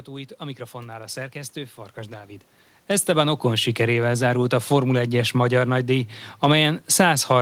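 No technical fault is present in the signal; the room background and the shift in level around two and a half seconds in, where the talker moves relative to the microphone, belong to the recording itself rather than to the system.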